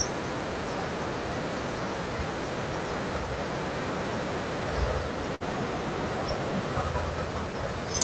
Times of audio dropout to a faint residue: none

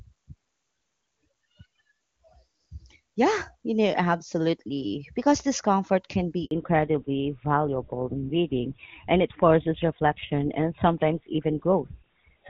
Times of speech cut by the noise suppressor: none

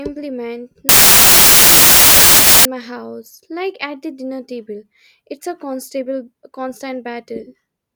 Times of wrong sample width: 0.89-2.65

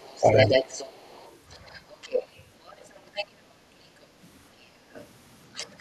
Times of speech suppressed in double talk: 0.20-0.24

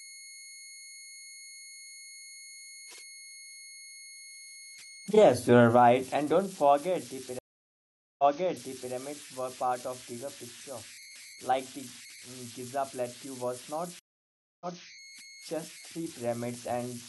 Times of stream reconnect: 7.39-8.93, 13.99-14.85

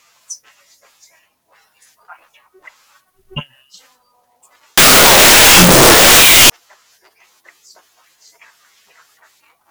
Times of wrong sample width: 4.78-6.50

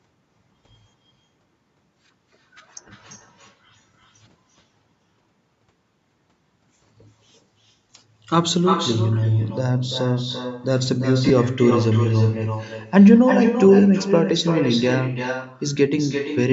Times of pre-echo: none

